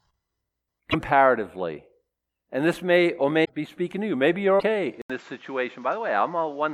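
Speech, with what is likely a broken MP3 bit reservoir: frames dropped from the stream leave the following frames reading borrowed data from the wrong place. The sound jumps ahead with a brief glitch at 0.90 to 0.95 s, at 3.44 to 3.50 s between "this may or" and "be speaking to you", and at 4.59 to 4.63 s, each lasting roughly two to three frames of about 26 ms. From 5.02 s to the end, the input has likely switched to a poorer device. After an 80 ms silence the speech continues at much the same level but duller, with nothing above 7.5 kHz and a faint new background noise about 35 dB below it.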